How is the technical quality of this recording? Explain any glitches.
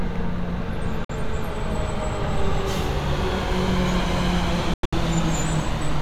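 The recording has two short holes in the sound.

Likely Bluetooth dropouts, at 1.05 to 1.11 s and 4.74 to 4.94 s. Audio packets evidently missed their delivery deadline to the headphones and were discarded, so the output fell silent with abrupt or briefly faded edges. The first gap lasts about 46 ms, which fits two lost frames. The second is a cluster of gaps totalling about 163 ms across 186 ms, the longest 93 ms. Afterward the sound resumes further along, as if it had continued unheard.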